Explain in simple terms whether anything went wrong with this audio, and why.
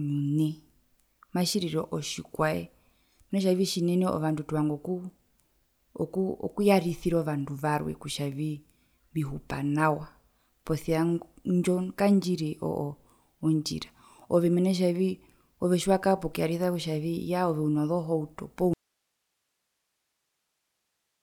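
Something did go wrong near the end. Right after "ove uno zohauto poo", at about 18.7 s, the speech suddenly cuts out and never comes back. What's left until the clip ends is just a faint hiss, far quieter than the talking. That's an audio dropout to a faint residue. The signal was most likely lost somewhere upstream while the rest of the chain stayed switched on, so you hear its background hiss instead of silence. It's an abrupt cut, not a natural pause or a fade.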